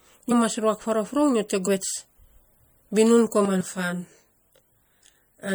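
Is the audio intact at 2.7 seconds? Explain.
No. At 2.7 s the speech carries audible MP3 compression damage, present throughout. Weak frequency lines flicker between frames, giving a watery, swirly texture with smeared attacks, likely from a low bitrate near 64 kbps. Unlike a plain low-pass filter, the flickering artefacts set it apart.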